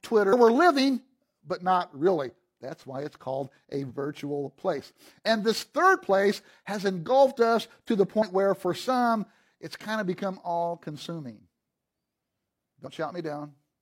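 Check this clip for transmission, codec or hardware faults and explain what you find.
The compressed speech stream has damaged data in five places, each a short burst of about 50 to 60 ms: 0.28–0.34 s, 0.75–0.80 s, 3.86–3.92 s (right after "why it's called a"), 8.18–8.23 s (between "engulfed us to the" and "where for some it's"), and 12.82–12.88 s. At each point the decoder meets corrupted bytes, misreads or discards those frames, loses sync, and hunts for the next valid frame header. That gap comes out as a brief chirp or squawk interrupting the speech.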